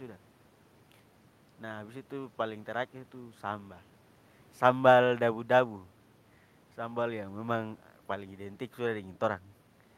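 Speech, with nothing technically wrong that can be heard anywhere in the clip.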